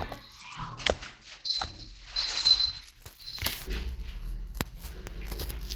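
From 0.4 s to 4.53 s the audio turns muffled and rough, with a watery, smeared texture, and everything above about 8 kHz is cut away. It is worst for roughly two seconds before clarity returns. This is a call bitrate drop: the call's bandwidth estimate fell, and the encoder switched to far coarser coding and a narrower band. The dulling points to a fall from around 48 kbps to about 11 kbps.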